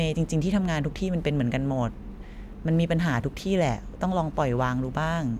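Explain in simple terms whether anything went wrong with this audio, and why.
Nothing went wrong with this speech recording: the signal stays steady and intact throughout, with no technical problem anywhere to point to.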